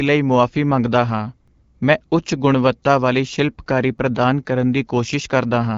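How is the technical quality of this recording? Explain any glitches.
Two small glitches from overlapping chunks, at 1.48 s and 3.98 s. Each chunk starts about 7 ms before the previous one ends, so that bit plays twice and you hear a quick click or stutter. The 2.5 s spacing fits fixed-length chunking. The speech runs through an AMR wideband (HD Voice) codec with light damage and nothing above 7.6 kHz, which fits the 12.65 kbit/s mode.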